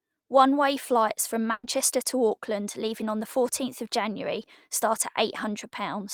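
It's a speech clip with a burst of packet loss at 1.51 to 1.66 s. For about 120 ms the receiver had nothing to play, so it stretched the last bit of sound it had and let it fade. That smeared, fading stretch stands in for the lost stretch. When audio picks back up, about 120 ms of speech has been skipped, so the speech jumps forward at the join.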